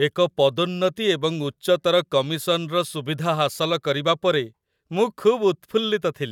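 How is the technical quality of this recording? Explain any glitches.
Listening through the recording, nothing technical stood out as a problem anywhere in it.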